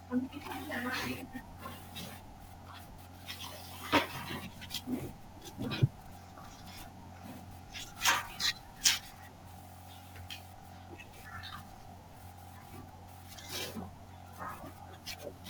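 Speech carrying sample clock jitter from start to finish: a gritty hiss rides on the louder, brighter passages and vanishes in the pauses, unlike a steady noise floor. Timing wander of a few microseconds leaves the error only about 20 dB below the signal.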